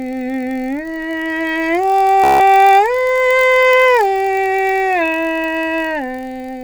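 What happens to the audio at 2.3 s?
A Bluetooth stutter runs from 2.24 to 2.40 s. Packets arrived late or not at all, so the receiver kept replaying its last short slice of music, producing a rapid machine-gun buzz for about 160 ms. The music then resumes further along, as though it had kept playing.

Underneath, the block size mismatch (padded) that runs through the whole clip continues here. One stage hands over blocks shorter than the next stage reads, and zeros fill the remainder, which fits a 1024-sample read. The result is a steady 46.9 Hz buzz and a tempo slowed by a factor of only 0.999, with the timbre unchanged.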